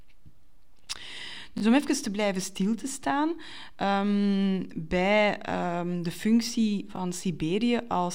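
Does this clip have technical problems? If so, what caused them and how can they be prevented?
Yes: a repeated buffer at 1.58–1.62 s, just before "om even te blijven", and at 6.96–6.98 s, after "bij ehm de functie". Late audio made the device replay a short block, which fits a 20 ms buffer, producing brief stutters. Larger playback buffers and a steadier audio thread prevent this.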